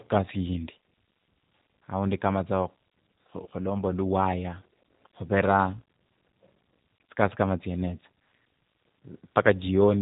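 From start to finish the speech carries G.729 codec damage, plainly audible and consistent with an 8 kbit/s G.729A stream. The decoder rebuilds each 10 ms frame from a vocal tract filter, a pitch predictor and a handful of pulses, so the voice sounds rough and faintly synthetic. Nothing reaches above 4 kHz. A plain low-pass filter would only dull the sound, but this rough, synthetic texture comes from the pulse model itself.

At 3.44 to 3.47 s there is VoIP packet loss concealed by the speech codec. About 20 ms of audio, likely one lost packet, was replaced by extrapolation from the last pitch and filter with the gain turned down, so the sound smears into a brief buzzy tone or coloured noise that fades. A hard dropout would leave silence or a click, but here the sound stretches, and the voice stays weak for a moment after the gap because later frames build on the guessed one.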